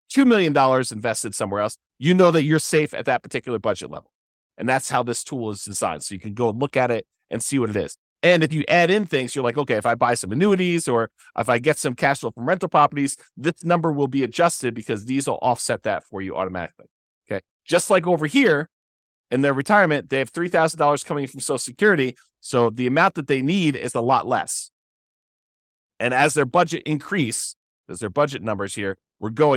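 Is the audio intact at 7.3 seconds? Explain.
Yes, at 7.3 seconds the speech plays through intact, with no dropout, click, distortion or other fault at that moment.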